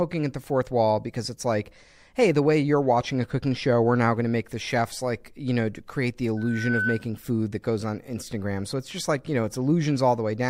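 A speech clip with loudspeaker feedback squeal from 6.37 to 7.07 s: a 1.5 kHz tone swells over about 0.4 s to roughly speech level, as the microphone-loudspeaker loop exceeds unity gain.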